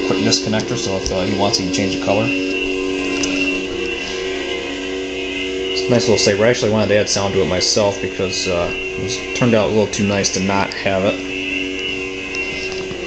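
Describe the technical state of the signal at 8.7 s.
At 8.7 s the signal is intact, with no dropout, distortion, glitch or other technical fault audible at that moment.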